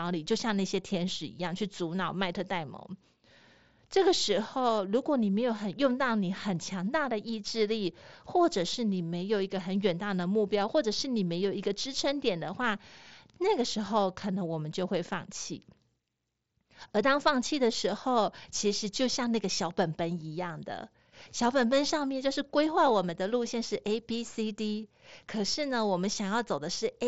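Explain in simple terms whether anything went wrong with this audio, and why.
Nothing went wrong: the speech comes over a Bluetooth mSBC headset link, which carries sound up to about 7.7 kHz with only that codec's light graininess, and nothing else happens to it.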